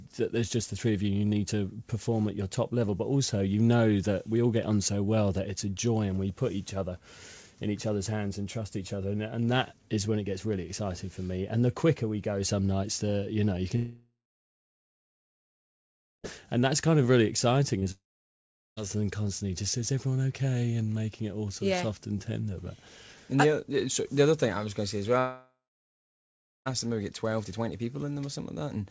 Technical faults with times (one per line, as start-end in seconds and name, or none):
13.76-16.26 long network dropout
17.80-17.87 short concealed packet loss
17.91-18.79 long network dropout
25.19-26.68 long network dropout